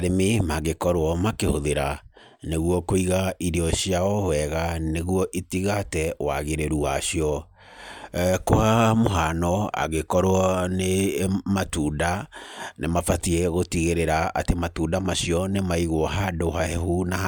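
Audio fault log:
No fault is heard anywhere in this speech recording. There is nothing to log at any point in the clip.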